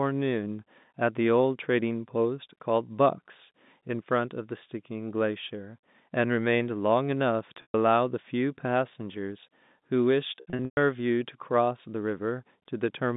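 At 7.62 s the speech holds briefly on a buzzy, sustained tone for about 120 ms until 7.74 s. Then from 10.38 s to 10.77 s it stutters through similar held tones, with about 270 ms missing across roughly 420 ms and the longest gap 120 ms. This is packet loss with pitch repetition. Lost packets were concealed by repeating the last pitch period, and the telephone band of the G.711 line remains audible around the repairs.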